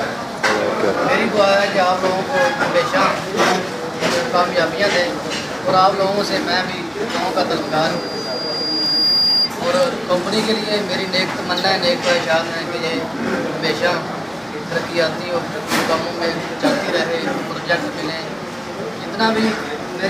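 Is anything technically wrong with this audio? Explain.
Yes. From 7.6 to 9.5 s there is loudspeaker feedback squeal. A microphone is hearing its own loudspeaker, and at 4.8 kHz the loop gain tops one. That tone swells over about a second and a half into a piercing whistle, ending up a few decibels louder than the sound itself.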